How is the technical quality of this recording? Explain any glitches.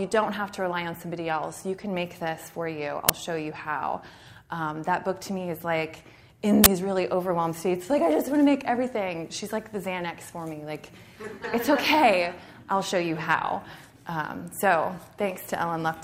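Two glitches break the recording, both from an uninitialised buffer. At 3.09 s and again from 6.64 to 6.66 s, playback read blocks before audio was written into them, so leftover memory came out as samples. The lengths, about 11 ms and 21 ms, fit 512-sample and 1024-sample buffers, and each is heard as a loud crack or short burst of digital noise.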